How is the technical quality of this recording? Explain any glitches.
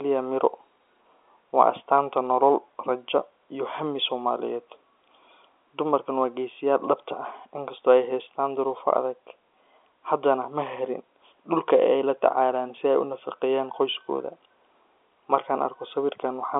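No glitches turn up here; the speech comes across as an ordinary phone call, with the narrow telephone band running from about 300 Hz to 3.5 kHz and nothing above roughly 3.7 kHz, just as you'd expect from 64 kbps G.711 mu-law telephone coding.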